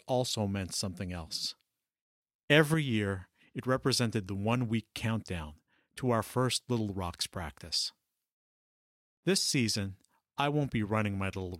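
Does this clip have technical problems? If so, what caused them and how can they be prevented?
Yes. From 2.21 to 2.74 s there's a sudden gain jump: speech and background noise step up together by about 6 dB, then fall back just before "year it represented the". That's likely a gain change applied without a ramp. Fading gain changes over a few milliseconds prevents it.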